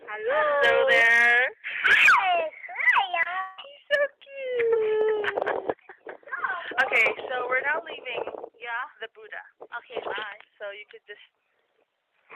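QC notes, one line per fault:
3.11–3.15 s and 3.23–3.27 s, short concealed packet loss: about 20 ms of audio went missing each time, and the receiver bridged it with roughly 17–18 ms of synthetic continuation before crossfading back into the real signal. The result is a brief smear or wobble. On a spectrogram each spot shows blurred, stretched harmonics or a soft noise patch where detail should be. The waveform shows a slightly too-regular repeated cycle with a smooth rejoin.
3.41–3.60 s, long network dropout: for about 160 ms no real audio arrives. The gap is filled end to end with roughly 166 ms of continued sound, a buzz or hiss that decays without ever reaching silence, and the real signal then resumes with that stretch absent. This is likely a network outage rather than a local fault. A spectrogram shows smeared, static harmonics or flat noise fading across the gap, and the waveform shows a steadily shrinking repetitive envelope, then an abrupt content change.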